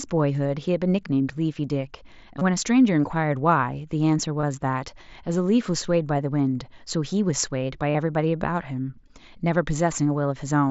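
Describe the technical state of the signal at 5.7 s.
At 5.7 s the speech is intact, with no dropout, click or distortion, only the wideband character of the Bluetooth mSBC headset codec, which keeps content up to about 8 kHz and adds a light graininess on louder sounds.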